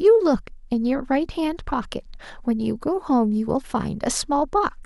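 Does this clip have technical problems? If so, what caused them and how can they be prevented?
No, nothing in this speech clip stood out as a technical problem on listening, so there is no cause to trace and nothing to prevent.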